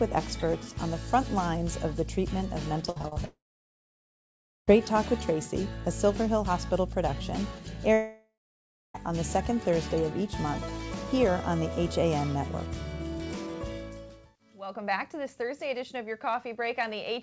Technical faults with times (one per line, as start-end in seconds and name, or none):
2.90-3.18 repeated packet loss (robotic sound)
3.26-4.69 long network dropout
7.93-8.96 long network dropout